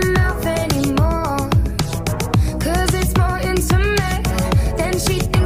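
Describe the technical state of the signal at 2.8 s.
At 2.8 s the signal is intact, with no dropout, distortion, glitch or other audible fault at that point.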